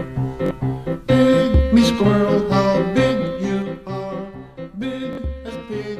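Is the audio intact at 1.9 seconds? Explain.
Yes, the audio is intact at 1.9 s, with no fault present at that moment.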